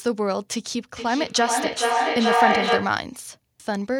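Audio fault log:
0.96 to 3.04 s, feedback echo between two devices: the speech returns at a steady interval of roughly 0.4 s, each pass thinner and more ringing. The repeats stack up rather than fading, and peak about 4 dB above the speech itself. A second device in the room replays this microphone's signal, which is picked up again, and neither echo canceller removes the other's output. On a spectrogram, evenly spaced copies of each syllable smear rightward with narrowing bands. The waveform envelope swells instead of decaying.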